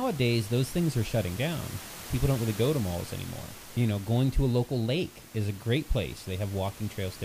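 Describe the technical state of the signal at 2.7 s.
At 2.7 s the speech signal is intact, with only the room's own background noise sitting about 17 dB beneath it.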